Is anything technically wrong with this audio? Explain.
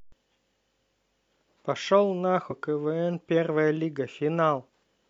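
Yes. The speech has two short bursts of damaged data in a compressed stream, at 2.47 to 2.51 s and again at 4.65 to 4.69 s, each lasting about 44 ms. At both points the decoder met corrupted bytes it could not interpret correctly, lost frame sync and hunted for the next valid frame header. What it produced meanwhile comes out as a brief chirp, squawk, click or short hole cutting into the speech before normal decoding resumes.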